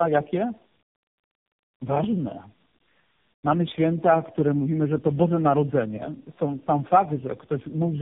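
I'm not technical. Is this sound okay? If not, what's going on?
No. From start to finish the speech sounds rough, muffled and warbly, and nothing above about 3.8 kHz gets through, so it lacks crispness. This is tandem speech coding. The call passed through three different phone-network speech compressors in a row. Each one unpacked the sound and squeezed it again in its own way, working on the already damaged output of the one before. The flaws pile up, making the speech worse than any single link would.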